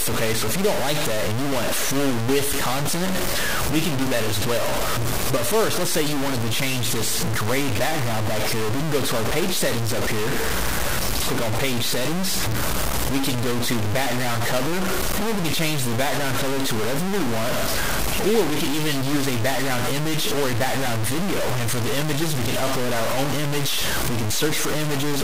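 From start to finish the sound is heavily gritty, with distortion that moves with the signal. The error is roughly as loud as the signal itself. Quiet passages sputter or drop out. The likely cause is low bit depth without dither, truncated to about 3 bits.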